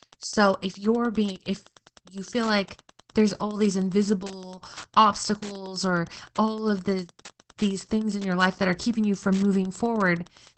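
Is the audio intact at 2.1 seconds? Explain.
No. At 2.1 seconds, as throughout the clip, a nearby Wi-Fi radio's beacons, every 102.4 ms, are rectified by the audio circuit. This Wi-Fi interference produces steady ticking about ten times a second, roughly 25 dB below the speech. Opus voice compression in SILK mode also codes the excitation coarsely and cuts everything above 8.3 kHz, which fits a bitrate near 12 kbps. The speech sounds plainly muffled, hoarse and slightly robotic.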